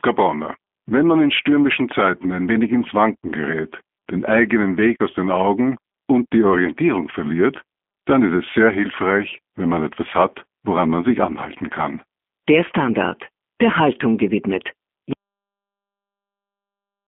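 From the start, the speech carries G.729 codec damage that is plainly audible: a slightly rough, synthetic edge, as each 10 ms frame is rebuilt from a vocal tract filter, a pitch predictor and a few pulses rather than the original waveform. The sound points to an 8 kbit/s VoIP codec over a telephone line band of 200 Hz to 3.4 kHz. On a spectrogram, energy sits in that band, with nothing above 3.5 kHz.

At 15.13 s the audio has a cut-off end. The final buffers were never written or played, so the speech stops partway through a sound instead of finishing or fading. It drops straight to digital silence with no decay, and that silence runs to the end of the clip. On a waveform, the signal ends abruptly at that point and is followed by a near-flat line. On a spectrogram, every band goes blank at the same instant.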